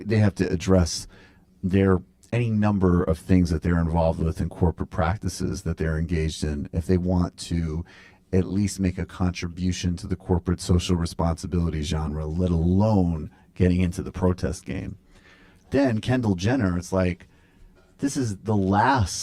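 Speech with channel delay (comb filtering) throughout. One channel lags by about 10 ms before mono summing. Notches start near 50 Hz, repeating every 100 Hz, leaving it hollow.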